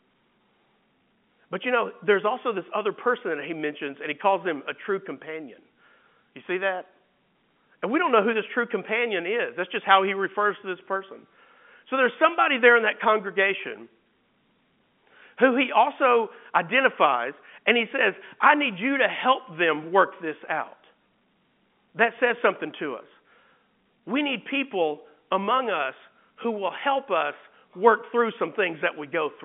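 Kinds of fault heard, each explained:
No faults can be heard anywhere in this speech clip. It comes over a G.711 telephone path, with the sound held inside the narrow line band of roughly 150 Hz to 3.5 kHz and nothing above about 3.7 kHz.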